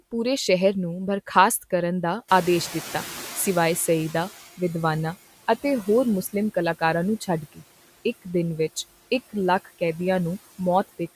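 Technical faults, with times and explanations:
Throughout: noise suppressor artifacts. The suppressor lowers bands it judges to be steady noise, by about 15 dB, frame by frame. The background therefore dips in pauses and swells under the speech.
2.28–4.49 s: noise suppressor catching up. The room noise jumps by about 13 dB near the two-and-a-half-second mark. The suppressor's noise estimate lags, so the louder noise passes with less reduction at first. It then sinks by about 12 dB as the estimate adapts over 2.2 s.
7.52–7.62 s: speech cut by the noise suppressor. For about a tenth of a second, the suppressor mistakes part of the speech for background. It drops that part by as much as about 16 dB, so the sound there seems swallowed and faint, pulled down with the noise.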